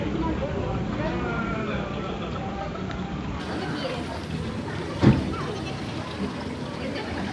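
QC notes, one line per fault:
3.40–7.32 s, wrong sample rate: from here to the end the audio runs about 1.38 times fast and sits roughly 5.6 semitones high, speed and pitch shifting together. This fits 16 kHz material played back at 22 kHz with no rate conversion.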